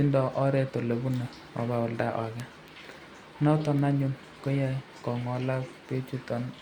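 It's a speech clip with three bit error spikes, at 1.14 s, 2.40 s and 3.79 s. Each is a single sharp, broadband tick that has nothing to do with the speech around it. The first two peak at about -20 dBFS and the last at about -26 dBFS. The one at 2.40 s spans three neighbouring samples. The cause is a flipped bit in memory or on a digital link, which throws a sample's value off by a power of two before it snaps straight back.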